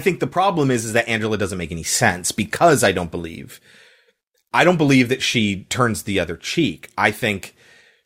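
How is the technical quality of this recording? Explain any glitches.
No glitches can be heard anywhere in this speech recording. There is nothing here that needs explaining.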